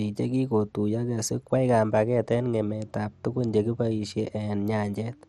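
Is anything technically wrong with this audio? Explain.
Yes. MP2 compression runs throughout the speech. The sound is dull, with nothing above 13.5 kHz, and carries a plainly audible gurgling, granular texture. The likely cause is Layer II coding starved of bits, which switches off upper sub-bands and coarsely quantises the remainder, consistent with roughly 64 kbps.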